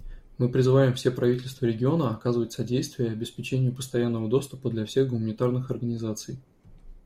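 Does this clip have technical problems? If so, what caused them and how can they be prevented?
No, this clip has no technical problems, so there is nothing to trace to a cause or prevent.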